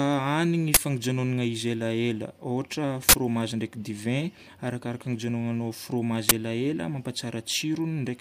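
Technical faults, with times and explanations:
0.74–0.77 s, 3.09–3.14 s (just before "ndraiky divay arakaraka ny") and 6.29–6.32 s (just after "divay arakaraka ny hijanonanao"): uninitialised buffer. Each block played out before any audio was written to it, so stale memory came out as a loud crack, or for the longer block at 3.09 s a burst of digital noise. The 23, 46 and 23 ms lengths fit 1024- and 2048-sample blocks. The waveform shows abrupt slabs, and the spectrogram shows sharp broadband vertical bars.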